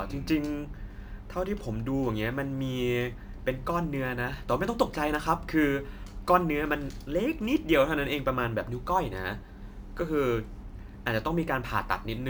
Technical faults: crude rate conversion

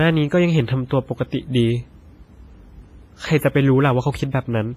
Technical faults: WMA compression

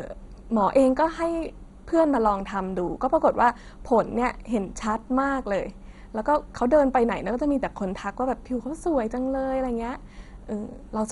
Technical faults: MP2 compression

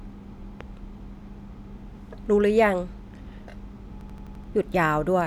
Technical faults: loud pop; system hang loop

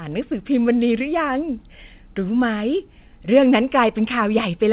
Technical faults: none

